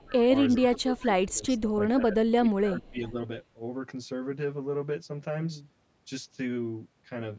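Throughout, channel delay (comb filtering) gives the speech a hollow, phasey tone: one channel lags by around 10 ms before the mono sum, carving evenly spaced notches from about 40 Hz upward, seen as fixed horizontal stripes on a spectrogram. Above the stripes, the spectrogram ends cleanly near 8 kHz, where the call microphone processing stops.

From 0.0 to 0.31 s the speech dips by up to about 20 dB, most likely speech suppressed in double talk. The canceller, confused by simultaneous talk from the far side, turns the near talker down, so the waveform envelope sags.

Inside that span, at 0.13–0.21 s, a faint echo appears, likely an echo leak. A copy of the voice arrives 0.4 s late at around 25 dB below the speech, showing as a weak, smeared repeat of earlier spectral shapes.

The same suppression returns from 0.58 to 1.78 s, with the envelope squashed by up to about 20 dB.

Within it, from 0.6 to 0.77 s, another 0.4 s-delayed echo, likely a further echo leak, comes through at a similarly low level.

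A final suppressed stretch runs from 1.96 to 3.15 s, where the waveform thins.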